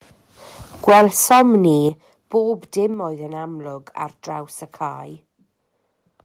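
From 0.88 to 1.67 s the speech shows microphone overload: peaks run about 10 dB past full scale and a sizeable share of samples are flattened, most likely because the input volume was set too high. The cut-off peaks give loud syllables a harsh, crackling edge.

The microphone volume is stepped down three times: at 0.89 s by about 4 dB, at 1.89 s by about 9 dB, and at 2.94 s by about 4 dB. Each drop is abrupt, lowering voice and background together. The likely cause is the call software's automatic gain control reacting to the clipping.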